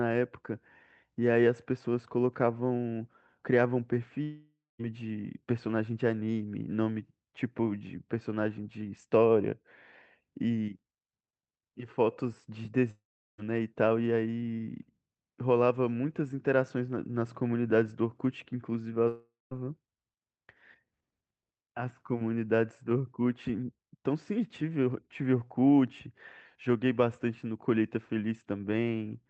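Long network dropouts at 4.23–4.81 s, 12.91–13.40 s and 19.08–19.61 s are likely stalled packet delivery. Each time the receiver stretches the last sound into a fading buzz, then leaves near-silence for about 0.2, 0.37 and 0.18 s. Roughly half a second of audio is lost before the sound resumes. The call codec's high-frequency cutoff near 8 kHz fits Opus at about 32 kbps.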